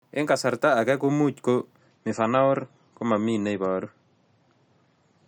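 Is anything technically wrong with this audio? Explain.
Yes. From 1.78 s to the end, the speech drops to a lower-bitrate version of the adaptive stream. The change is abrupt, with no gap. The player has likely switched streams because the connection slowed. Quality falls from what sounds like 128 kbit/s MP3 to about 32 kbit/s. Nothing remains above 8.4 kHz, so the speech turns dull and muffled. Codec artefacts also rise.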